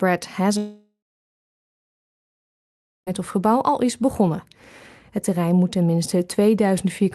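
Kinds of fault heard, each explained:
long network dropout: From 0.57 s to 3.09 s the audio stops arriving, most likely because the network lost it in transit for about 2.5 s. The receiver first extends the last sound as a buzz or hiss that fades within a few tenths of a second, then leaves about 2.1 s of silence. The audio resumes at 3.09 s with the lost stretch simply absent. Around the gap, call-codec coding noise and a top end cut off near 12 kHz are audible.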